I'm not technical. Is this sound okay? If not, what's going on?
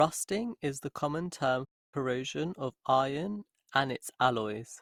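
No. There are two problems.

Throughout the clip, the speech sounds swirly, hollow and smeared, and the starts of sounds lose their crispness. This is generation loss. The recording was likely squeezed down to a small file and unpacked again several times over, probably around four rounds. Each round throws away a bit more detail and adds its own noise, and the damage builds up.

Right after "is the common term", at 1.64 s, the sound cuts to silence for about 0.28 s and resumes at 1.94 s. This is a playback stall. The player most likely ran out of audio to play, or got held up for a moment, so it went quiet until it caught up and carried on.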